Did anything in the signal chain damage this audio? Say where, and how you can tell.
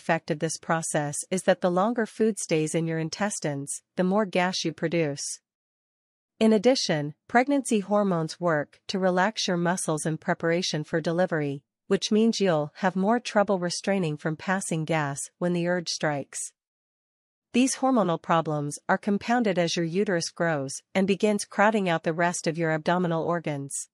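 No, nothing along the way seems to have harmed this audio, and it sounds just as it should at every point you could check.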